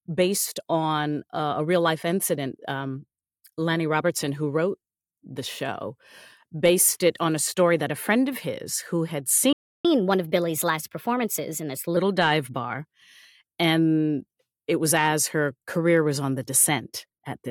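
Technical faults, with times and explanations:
9.53–9.85 s, playback stall: the speech cuts out mid-flow and the output goes completely silent for about 0.32 s before the sound resumes. A gap of this kind, with nothing audible inside it, is likely the player running out of buffered data or its playback thread being blocked, so no samples reach the output until it recovers and carries on from the point where it stopped.
9.85–11.97 s, catch-up at higher speed: right after the gap the speech runs fast for just over two seconds, at 1.15 times normal speed, and sits about two semitones higher in pitch. The player is working through the backlog left by the stall by resampling it, which shortens the audio and raises its pitch together. Once the lost time has been won back, speed and pitch drop back to normal.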